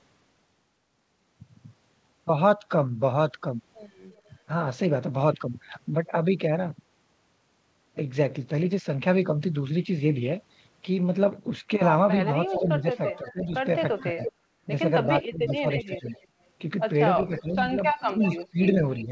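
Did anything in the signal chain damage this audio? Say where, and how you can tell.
Yes. The damage comes from call processing, specifically the echo canceller on the loudspeaker side of the call.

Echo leak: A delayed copy of the sound arrives about 0.34 s behind the original. It is faint at 4.11–4.31 s, about 35 dB down. It is much stronger from 12.27 to 16.27 s and from 17.19 to 19.05 s, only about 10 dB below the direct sound. The consistent lag points to acoustic coupling from a loudspeaker into a microphone. The likely cause is residual echo that the canceller failed to subtract and sent back down the line.

Speech suppressed in double talk: From 12.51 to 16.06 s, the speech dips by around 15 dB in pieces totalling roughly 1.5 s. It drops again from 17.17 s to the end. These dips coincide with the strong echo passages, so the likely cause is the canceller failing to separate the near talker from the loudspeaker return. 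It attenuated both together, and the talker loses level and clarity in chunks.

Background gated by the echo canceller: At 14.5–14.65 s, the room tone falls by about 11 dB for 150 ms and then recovers. This is the suppressor clamping the microphone hard while loudspeaker energy is present, then releasing. Behind all of this, the band stops at 8 kHz, consistent with the G.722 call codec.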